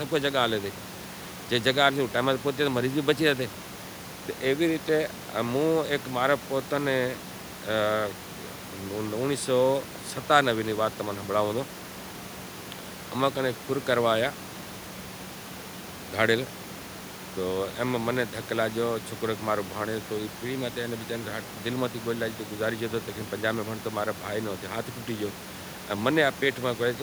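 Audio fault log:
No fault appears in this speech clip, with room noise sitting about 17 dB below the speech.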